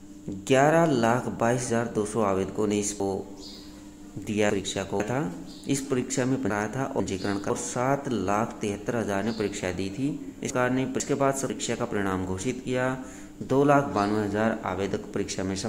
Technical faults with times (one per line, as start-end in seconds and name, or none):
3.00-5.00 chunks out of order
6.50-7.50 chunks out of order
10.50-11.50 chunks out of order